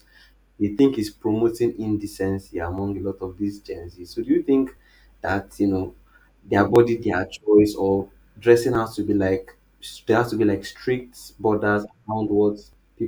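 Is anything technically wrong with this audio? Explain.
Yes. Periodic USB or driver dropouts occur from 0.79 s to 12.73 s, repeating every 1.99 s. Each time, a background task stalls the audio path and around 10 ms of speech is skipped outright, causing a regular tick or small jump in the signal.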